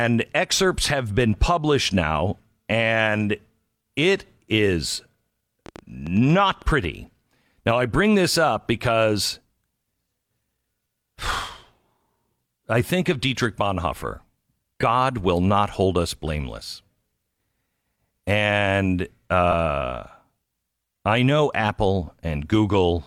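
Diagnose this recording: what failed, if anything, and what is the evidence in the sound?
Train of clicks, 5.66 to 6.85 s: about ten sharp, similar ticks at roughly 8.5 per second, unevenly spaced, peaking a little above the speech and audible in pauses too. This is likely interference in the analogue wiring or a faulty connection or power supply injecting repeated pulses.

Lost LE Audio frames, 14.81 to 14.83 s and 19.52 to 19.54 s: the Bluetooth link dropped audio, and the LC3 decoder filled the gap by reusing the last spectrum with scrambled signs. That produces a brief noisy smear, 20 ms at the first point (two 10 ms frames) and 10 ms at the second.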